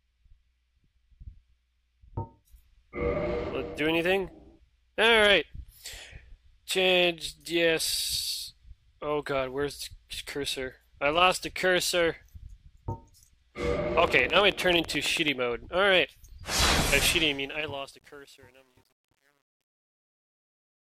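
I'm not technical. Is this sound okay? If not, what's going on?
No. From 14.08 to 15.29 s there is a train of clicks: about ten identical ticks, evenly spaced at roughly nine per second. Their regular rhythm, unlike random crackle, points to a likely cause in nearby equipment or a faulty connection or power supply.

From 17.04 s to the end, truncation distortion on a fade sets in. The fade-out itself is smooth, but as it gets quiet, especially after 17.78 s, the sound turns gritty rather than dying away cleanly.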